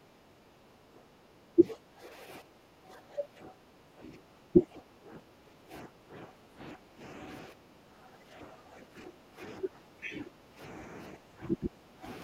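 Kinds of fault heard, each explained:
Background gated by the echo canceller: The echo canceller clamped the microphone down while the far end played, so the room sound sinks by about 13 dB in stretches adding up to around five seconds between 0 and 9.32 s, with one more brief dip at 10.52 s.
Speech suppressed in double talk: The echo canceller likely mistook overlapping talk for loudspeaker echo and turned the talker down with it. The speech dips by roughly 10 to 20 dB in short bursts at 0.48, 1.55, 3.16, 4.53, 9.6 and 11.27 s, the last lasting longest.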